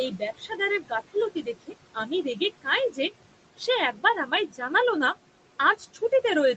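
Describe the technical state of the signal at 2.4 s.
At 2.4 s the noise suppressor is misjudging the speech. Between 2.35 and 3.11 s it treats parts of the speech as steady background and turns them down with it, by up to about 17 dB. In total only about 150 ms within that span is affected. This is speech cut by the noise suppressor: soft consonants and word endings in that stretch sound swallowed or faint.

Underneath this, noise suppressor artifacts run through the whole clip, including this moment. The suppressor lowers whatever frequency bands it judges to be noise, frame by frame, taking the background down by about 18 dB. The room noise drops in the gaps and comes back under the speech.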